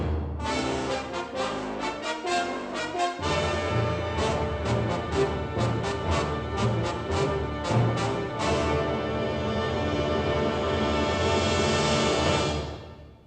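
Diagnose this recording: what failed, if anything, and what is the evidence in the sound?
Nothing failed; no faults heard.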